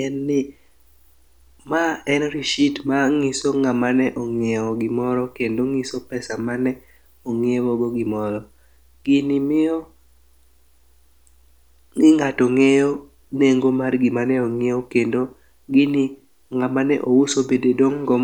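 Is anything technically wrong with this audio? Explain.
No, nothing technically wrong can be heard in this speech recording. There is no fault to point to at any moment in it.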